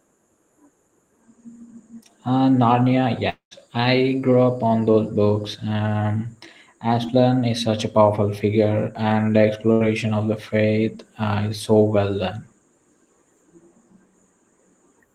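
At 3.29 to 3.53 s the speech stops and the last sound is stretched into a fading buzz or hiss, followed by about 120 ms of silence. It resumes at "I grew up on" with roughly 0.22 s missing. This is likely a long network dropout, where the receiver ran out of packets and concealment faded out.

From 7.07 to 7.10 s, just before "is such a powerful", a short concealed packet loss leaves a brief smear. About 20 ms never reached the decoder in time, and the receiver filled the gap by extending the preceding sound before blending back into the real audio.

Between "powerful figure and the" and "of the faith uh", at 9.72 to 9.82 s, a burst of packet loss removes about 80 ms. The receiver continued the last sound and turned it down across the gap, giving a decaying buzz or hiss before the speech picks up further on.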